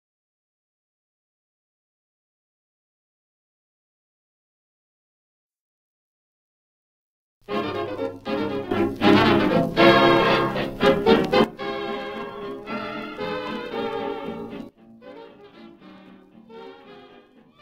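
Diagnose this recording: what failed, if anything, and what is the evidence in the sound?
A sudden gain jump, likely a digital gain setting applied without a ramp in the driver stage. At 8.71 s sound and background noise rise together by about 14 dB, returning at 11.44 s; at 14.69 s both drop about 16 dB through the end.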